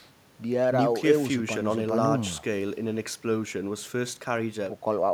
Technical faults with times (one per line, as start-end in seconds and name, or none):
none